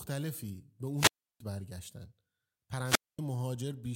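At 0.96 s the speech breaks up in a wireless microphone squelch dropout: the FM radio link fades, hiss swells briefly, then the receiver's squelch slams the output shut for about 330 ms before the speech comes back by 1.40 s. The same thing happens again from 2.84 to 3.19 s, with a shorter hole of about 230 ms. Both times it's that quick static rise followed by near silence.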